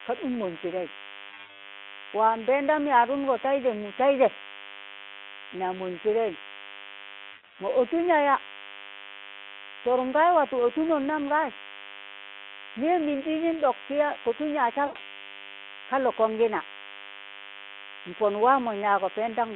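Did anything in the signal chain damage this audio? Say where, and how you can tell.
Yes. The damage starts in the analogue wiring: a DECT cordless phone or base station near the equipment is being picked up and rectified by the audio circuit. Its radio bursts arrive 100 times a second, so a thin, steady 100 Hz buzz with a dense ladder of harmonics sits under the speech for the whole clip, roughly 10 dB below it.

The network also dropped packets three times, and the speech decoder covered each gap by extrapolating from the last good frame. From 1.29 to 1.60 s and from 7.31 to 7.61 s the losses come in scattered runs, with the second gap holding a run of about 120 ms. A shorter gap runs from 14.85 to 14.99 s. Each gap sounds like a smeared, buzzy tone or coloured noise that fades, and the speech comes back weak before it recovers. The gap lengths fit 20 ms frames.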